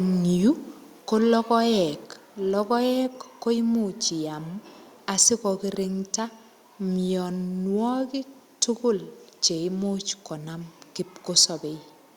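At 2.04 s the speech and the background drop together by about 2 dB. This is a microphone volume step-down. The call software likely lowered the device's input volume in one step. The change is abrupt, not a gradual fade.

Microphone overload follows from 5.21 to 5.29 s and again from 11.37 to 11.44 s. The peaks overshoot the converter's limit by about 3 dB, then about 2 dB. Their tops are sheared flat, a little over one percent of samples, then under one percent. This adds a harsh, crackling edge. The input volume was likely set too high.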